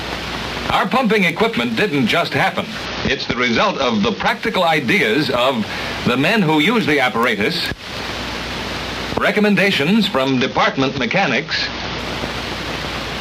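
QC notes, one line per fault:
2.86–4.28 s and 10.27–11.99 s, Bluetooth SBC bit pool drop: both times the top end goes dull and a gritty grain creeps in, then clears. Sounds like the link choked and the bit pool fell from around 28 to 8, roughly 72 kbps, starving the upper sub-bands.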